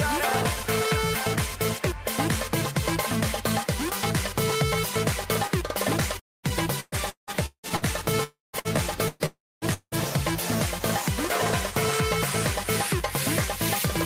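At 6.19 to 6.46 s the audio stops and the last sound is carried on and faded out, leaving about 210 ms of silence before it returns with roughly 240 ms missing. The same long network dropout recurs at 8.24 to 8.56 s (about 300 ms lost, 150 ms silent), 9.26 to 9.65 s (360 ms lost, 230 ms silent) and 9.74 to 9.95 s (180 ms lost, 60 ms silent). A stretch with no arriving packets is the likely cause.

Immediately after the first dropout, from 6.49 to 7.85 s, the sound turns choppy with pieces missing: repeated packet loss (robotic sound). Seven separate gaps fall in this span, the longest 175 ms, together removing about 540 ms. Each hole is patched by extending the preceding sound, and the next hole arrives before the stream settles, so about 40% of the span is concealment rather than real audio.

Two shorter bursts of packet loss sit among the later dropouts. At 8.59 to 8.68 s about 60 ms is lost. 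At 9.08 to 9.23 s about 120 ms is lost, and the fill never decays to silence. In both, the receiver stretches the last sound across the gap while lowering its level, giving a held buzz or a fading hiss, and the audio then resumes further on with the intervening portion gone.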